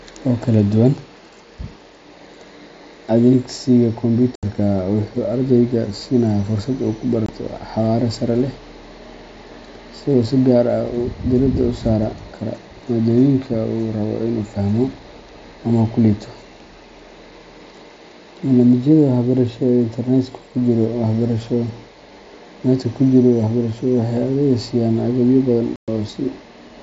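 Unconcealed Bluetooth headset packet loss cuts the speech three times. At 4.35 s, about 75 ms drops out just before "wuxuu ardayga siinayaa." At 7.26 s, a 22 ms hole falls between "uu ku" and "xawaare sare." At 25.76 s, 120 ms vanishes after "siiyaan agabyo badan." Lost headset packets were replaced by silence or an idle pattern, not patched over. Each gap starts and ends abruptly.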